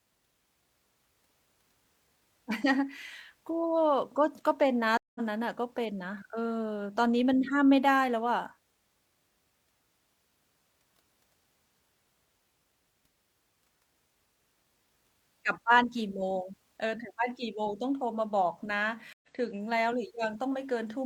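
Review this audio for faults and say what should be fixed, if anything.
Two stream reconnects interrupt the speech, at 4.97 to 5.20 s and at 19.13 to 19.28 s. The silences last 178 ms and 97 ms. Each time the connection dropped and a new decoder restarted mid-stream. Speech resumes roughly 150 ms and 100 ms later, so those moments are skipped.

Fix this with a larger network buffer and reconnect logic that resumes from the last received position.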